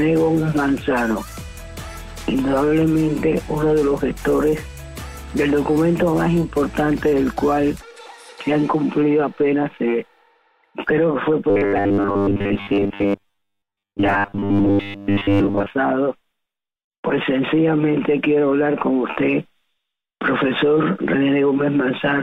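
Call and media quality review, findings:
Robotic sound from repeated short buffers, 11.50 to 15.70 s. Rigid metallic buzz at 100 Hz. Likely starved jitter buffer looping roughly 10 ms chunks, replacing most of the audio.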